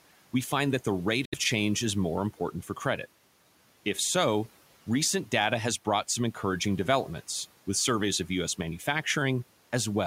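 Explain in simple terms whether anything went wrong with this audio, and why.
Something went wrong once. From 1.25 to 1.35 seconds, the sound cuts out completely, just after "find that the rate". It comes back at "change is more", skipping ahead rather than picking up where it stopped. This is likely a Bluetooth dropout, where a few audio packets arrived too late and were thrown away.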